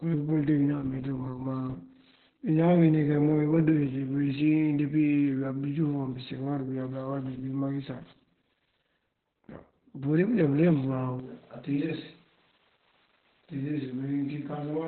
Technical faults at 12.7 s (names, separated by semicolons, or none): Opus voice compression; switch to a distant microphone